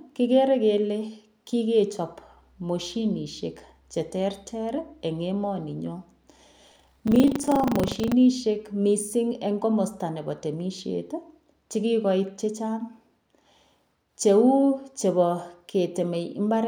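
From 6.64 to 8.14 s the speech takes on a robotic 25 Hz buzz, a steady rattle riding the signal. This is buffer tearing: writer and playback pointers cross inside each period, so roughly a sixth of every buffer replays audio about 70 ms stale, with hard joins.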